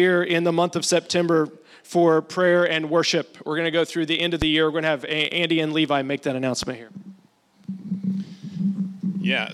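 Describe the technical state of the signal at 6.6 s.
A single sharp pop cuts in from 6.63 to 6.66 s, a brief thump standing roughly ten decibels above the surrounding sound, which continues underneath without interruption. This is a loud pop, most likely a sudden voltage step or spike entering the chain, from a plug being seated, a switch, a static discharge or a driver glitch. The downstream circuitry rounds that pulse into the short, percussive burst heard here.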